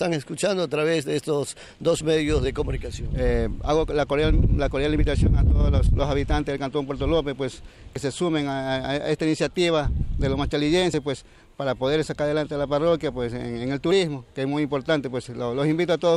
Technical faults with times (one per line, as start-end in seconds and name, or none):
2.01 audio missing between chunks
4.98 audio missing between chunks
7.96 audio missing between chunks
10.94 audio missing between chunks
13.91 audio missing between chunks